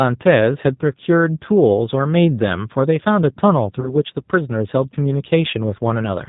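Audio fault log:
Throughout: G.729 codec. The speech is rebuilt from a vocal tract filter, a pitch predictor and a few pulses per frame, so it sounds plainly rough and synthetic, with nothing above 4 kHz. This fits G.729A at 8 kbit/s.
3.80 to 3.97 s: VoIP packet loss concealed by the speech codec. About 20 ms of audio, fitting a single lost packet, is filled by extending the last pitch and filter at falling gain. The decoder then needs time to recover, leaving the sound weakened or distorted until 3.97 s.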